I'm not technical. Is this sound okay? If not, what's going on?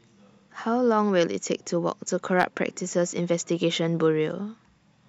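No. Around 2.39 to 2.43 seconds there is a brief burst of hard clipping. For that moment the speech got louder than the recording chain could handle, so the tops of the sound wave were sliced off flat instead of being captured in full. Flattening the wave like that adds harsh, buzzy overtones, which you hear as a short crackle or rasp on that loud instant. The overload is mild and lasts only a few hundredths of a second.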